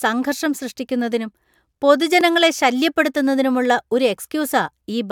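The clip is speech with one fault. At 2.21 s there is a block of digital silence. The signal drops straight to silence and returns without any fade. The hole lasts about 1.3 ms, which fits a 64-sample buffer left unfilled. A gap this short is heard as a tick or dip rather than an audible gap. The cause is a buffer not filled in time or an invalid calculation result replaced by zeros.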